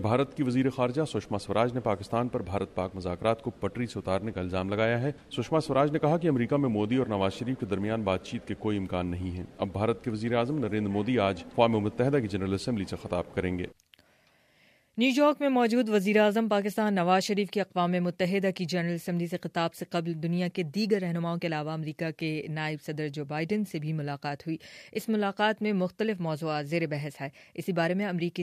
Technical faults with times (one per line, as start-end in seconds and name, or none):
none